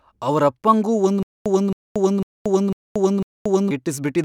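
From 1.23 s to 3.71 s the speech stutters with silent gaps: a 270 ms burst repeats five times, each followed by about 230 ms of dead silence, every 0.5 s. The likely cause is a stalled stream replaying its last fragment at each retry, losing the audio meant for that span.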